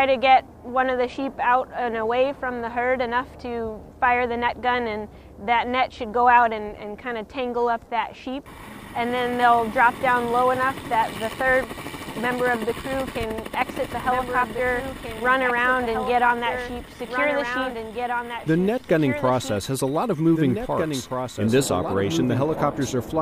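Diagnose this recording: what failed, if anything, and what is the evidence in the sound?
Doubled audio track from 13.54 s to the end: a second full-band copy of the sound enters abruptly, trailing about two seconds behind and roughly 5 dB quieter, with no decay or room colour. The likely cause is a slower second capture path or a misaligned edit.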